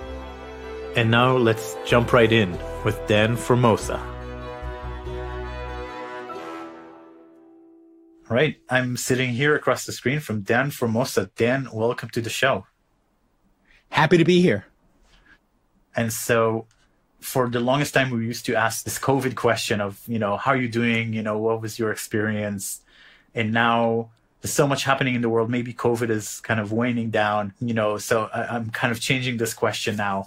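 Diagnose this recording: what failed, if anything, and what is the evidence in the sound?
Nothing in the signal chain appears to have failed, since no dropout, distortion, discontinuity or other defect can be heard at any stage of the recording.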